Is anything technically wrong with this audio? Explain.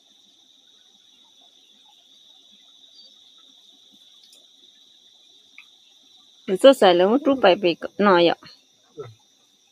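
Yes. Throughout the clip a noise suppressor applied to music or sounds is at work. A suppressor tuned for speech treats sustained tones, ambience and reverb as noise and pulls them down, while sharp attacks get through. Held material and decays sink by something like 20 dB, so the sound pumps and thins. On a spectrogram, tails are cut off abruptly and the bins between onsets flicker dark. The waveform shows envelopes that collapse right after each attack.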